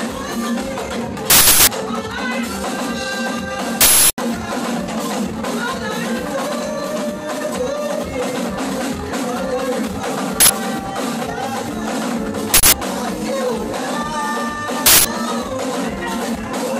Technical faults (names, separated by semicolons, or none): uninitialised buffer